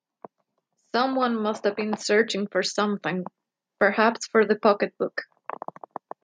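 From 1.17 to 3.36 s, the automatic gain control judged the input too quiet and steadily pushed its gain up, by about 4 dB over those two seconds. This automatic gain rising makes the speech and the background noise swell louder together.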